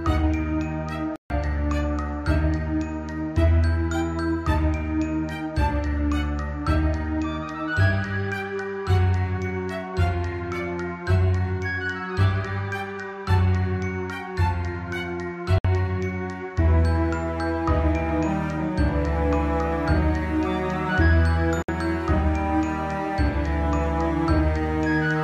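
At 1.16 s the sound cuts to silence for about 0.14 s, then again at 15.58 s and 21.62 s for about 61 ms each. The edges are abrupt or fade over a few milliseconds, and each time the audio resumes further along, as if it had kept playing. This fits a likely Bluetooth dropout, with packets arriving too late and being discarded.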